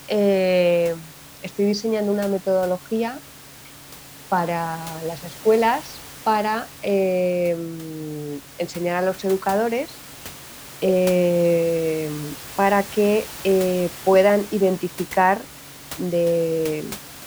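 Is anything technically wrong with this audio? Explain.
No, nothing is technically wrong.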